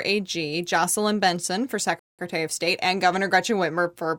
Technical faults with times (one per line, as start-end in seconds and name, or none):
1.99-2.19 rebuffering stall